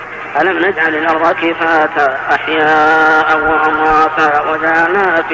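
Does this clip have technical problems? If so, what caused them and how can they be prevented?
No, nothing in this clip stood out as a technical problem on listening, so there is nothing here that needs preventing.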